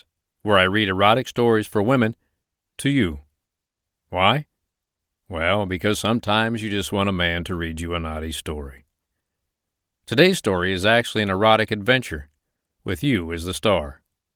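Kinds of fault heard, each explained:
No technical faults are audible.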